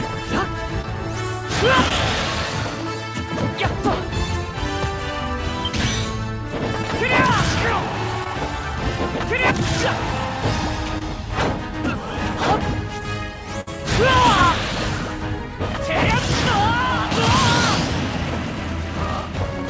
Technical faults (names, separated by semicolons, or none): short concealed packet loss; burst of packet loss